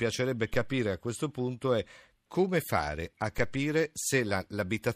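The zero line of the waveform jumps abruptly at 0.54 s and again at 3.38 s, a DC step of about -26 dBFS each time, as if an offset were suddenly switched into the signal path. Each offset then drains away through a 2 Hz high-pass, fading over a fraction of a second. At both moments a low thump sounds under the speech, which carries on unchanged.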